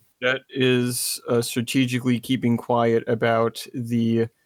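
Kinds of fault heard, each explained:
No technical faults are audible.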